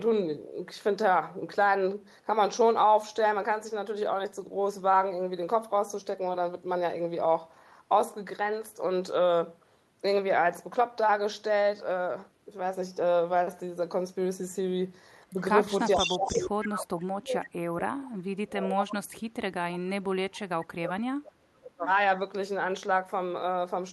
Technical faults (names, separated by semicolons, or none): echo leak; speech suppressed in double talk